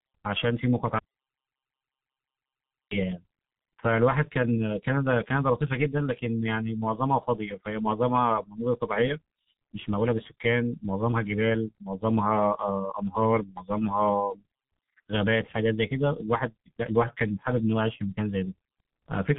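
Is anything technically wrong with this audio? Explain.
Yes. Throughout, the speech carries G.723.1 codec damage: at 6.3 kbit/s, coding in 30 ms frames with a slow-moving voice model, nothing above 3.8 kHz survives. Consonants blur and the voice turns muffled and hoarse, unlike plain low-pass filtering, which would dull the sound without the rasp.

From 0.99 to 2.91 s there is an audio dropout to silence, about 1.9 s of silence. The input was likely lost or muted while recording continued. What separates it from a quiet gap or packet loss is that no room tone remains and nothing is patched over.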